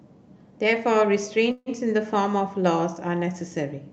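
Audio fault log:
1.51–1.69 s, call audio freeze: the speech stalls and its last sound is drawn out as a fading buzz or hiss for about 148 ms, then drops to roughly 20 ms of silence. The speech resumes exactly where it left off, now running 148 ms late. The likely cause is packets held up in transit, so the jitter buffer ran dry and the receiver stretched the final sound to cover the wait. Nothing is lost; a gap is inserted.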